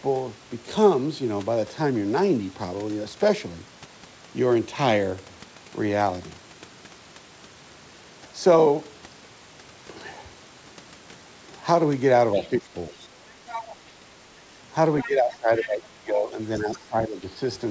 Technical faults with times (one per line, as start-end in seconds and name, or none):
12.33-12.47 other side's voice leaking through
12.36-13.11 speech suppressed in double talk
13.49-13.76 other side's voice leaking through
14.00-14.05 speech suppressed in double talk
14.99-15.69 other side's voice leaking through
15.04-17.33 speech suppressed in double talk
16.73-16.79 other side's voice leaking through